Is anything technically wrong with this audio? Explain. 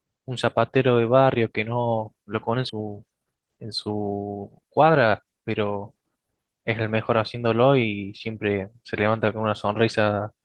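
Yes, there are two faults in this speech, close together.

The first is a skip ahead at 2.69 to 2.71 s. A stretch of about 0.7 s of speech was discarded while later audio was already queued, so playback jumps straight to the later material with no gap and nothing filled in. The two sides are butted together, giving an abrupt splice where sound simply goes missing. Unlike a dropout or concealed packet loss, there is no silence, buzz or smeared fill, and the timeline moves forward rather than stalling.

The second follows immediately. A jitter buffer speed-up runs from 2.79 to 4.90 s at 117% speed, trimming around 0.4 s in total. The receiver, holding more audio than it wanted, repeatedly cut out short pieces a pitch period or so long to shrink the delay. The speech sounds hurried, but the pitch stays where it was. That separates it from a resampling or clock error, which would raise pitch along with speed, and from a skip, since nothing large vanishes at once.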